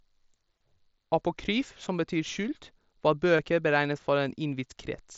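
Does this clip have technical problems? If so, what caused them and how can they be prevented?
Yes. The speech has concealed Bluetooth headset packet loss at 0.58 to 0.60 s and at 3.37 s. For about 22 ms and then 15 ms, the receiver filled each gap by repeating the best-matching recent waveform. This gives a short buzzy hold, which fits runs of two or three lost frames, over the light mSBC graininess. Keeping the headset close to the phone, with no obstructions or competing 2.4 GHz traffic, prevents these losses.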